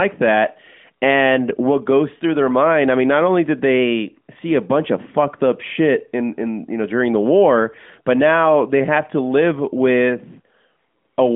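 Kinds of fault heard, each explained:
No faults are present: the speech passes through an AMR narrowband mobile codec path with the usual telephone band of roughly 200 Hz to 3.5 kHz, nothing above about 3.6 kHz, and only light coding texture, consistent with the codec's 12.2 kbps mode.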